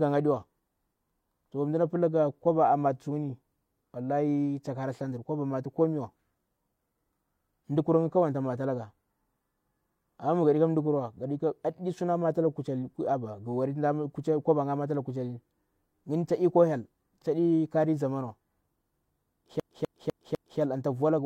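A speech recording that skips like a scratched CD stuck on one turn from 19.60 to 20.60 s, just before "anta voalaga". The same 250 ms slice of audio plays four times, each repeat separated by a brief mute as the laser jumps back one track on each rotation. On a waveform this shows as four identical blocks with thin silent gaps, and on a spectrogram as a repeating tile pattern at even 0.25 s spacing.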